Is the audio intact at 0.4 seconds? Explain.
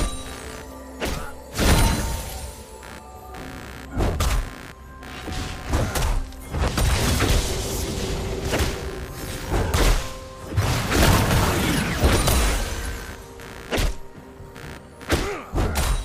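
No. Computer activity noise runs through the whole clip, including 0.4 s: processor load shifts the shared ground, giving a buzzy pulsing around 70 Hz that varies with computer activity, unlike steady mains hum.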